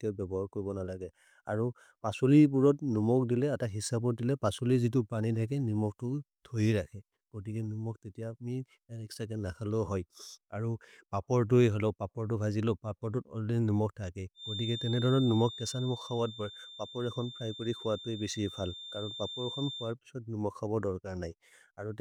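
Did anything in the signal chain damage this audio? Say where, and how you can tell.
Yes. A feedback whistle at 3.6 kHz sits about 15 dB under the speech from 14.34 to 19.95 s, likely a speaker-to-microphone loop held just at the threshold of oscillation.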